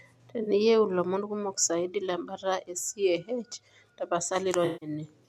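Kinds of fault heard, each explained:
Corrupt frame concealed: damaged AAC frames were detected by the decoder, which covered them itself instead of playing garbage. A short stretch runs from 0.42 to 0.48 s, consistent with a few frames, and a longer one from 4.65 to 4.90 s, about 0.25 s, which points to a run of several consecutive frames.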